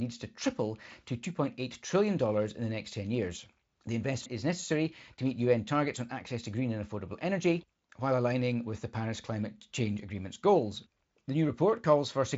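Nothing faulty can be heard anywhere in this speech recording.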